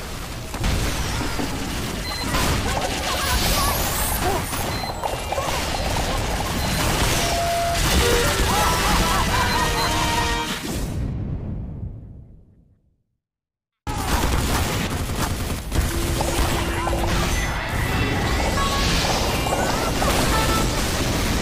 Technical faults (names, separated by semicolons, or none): loudspeaker feedback squeal